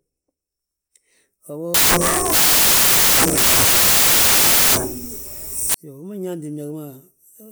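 A speech recording in which, from 1.74 s to 5.74 s, the sound turns into loud, harsh broadband noise for four seconds. This is samples built from the wrong bytes: each sample's bytes are assembled in the wrong order or at a one-byte offset, so the rapidly fluctuating low-order bits land in the most significant position and dominate every value.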